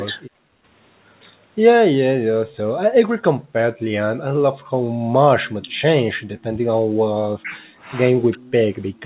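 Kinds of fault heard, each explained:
Speech suppressed in double talk: The voice sinks by roughly 15 dB in a short dip around 0.22 s and then off and on from 5.6 to 8.65 s, about a second and a half in all. That's likely the echo canceller clamping down while both ends talk at once.
Background gated by the echo canceller: The room tone gets yanked down while the far end plays through the loudspeaker, about 28 dB briefly near 0.6 s, then up to about 38 dB in patches between 3.09 and 5.04 s before the canceller lets go.
Echo leak: A faint copy of the voice trails the original by 354 ms, a tiny scrap at about 35 dB down near 2.5 s, then a longer stretch at about 30 dB down from 5.45 s to the end, likely residual loudspeaker echo the far end didn't cancel.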